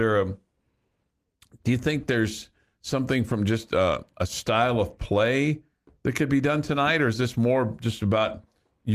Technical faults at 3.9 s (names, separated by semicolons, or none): none